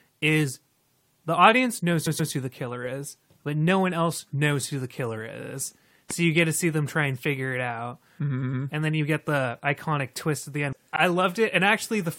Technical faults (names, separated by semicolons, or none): repeated frames; loud pop